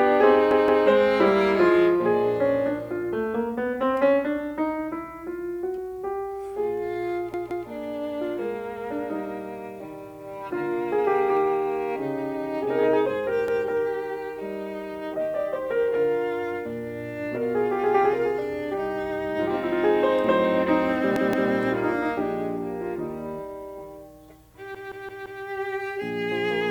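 Music in which new audio arrived too late, so playback replayed its last 171 ms block, consistent with an 8192-sample buffer. This repeated buffer fault makes hard-edged stutters at 0.51, 7.34, 13.48, 21.16 and 24.75 s, the last repeating four extra times.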